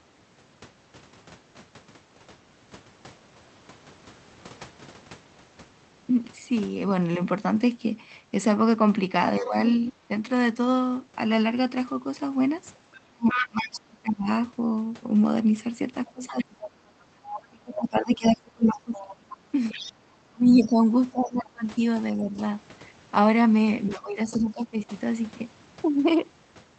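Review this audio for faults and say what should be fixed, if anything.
Other side's voice leaking through: the echo canceller likely left part of the loudspeaker signal in the microphone feed, so a second, quieter voice bleeds in at 9.39–9.92 s, 12.75–13.79 s, 16.07–20.71 s and 23.87–24.43 s. It ranges from about 25 dB below the talker to about 5 dB below, and is loudest around 13 s.

Speech suppressed in double talk: while both sides spoke, the canceller likely could not separate the talker from the echo and attenuated everything. The talker dips or drops out at 9.4–10.1 s, 12.95–14.29 s, 16.07–22.39 s and 23.89–24.92 s. The cut is about 40 dB at its deepest near 13 s, and the longest stretch runs through most of 16–22 s.

To prevent both, give the echo canceller a properly aligned loudspeaker reference and better double-talk detection, so it removes the echo without ducking the local talker.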